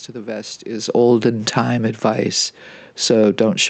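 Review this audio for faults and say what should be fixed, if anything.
Automatic gain falling from 0.83 to 1.22 s, between "to the vest" and "time advice": the control judged the input too loud or its background noise too strong and pulled level down about 5 dB, background included. To prevent it, lower the input gain at the source or slow the gain control's attack so brief loud passages don't trigger reductions.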